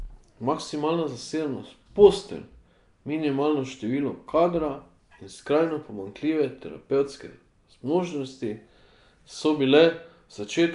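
From start to finish the speech carries a rough, hissy halo and a smeared, underwater quality, with the codec damage plainly audible and nothing present above 10.6 kHz. This is likely Nellymoser compression, the old Flash microphone codec, which spends a fixed two bits per sample on short blocks, gives weak bands no bits and fills them with noise. The degree of damage fits a rate of roughly 44 kbps.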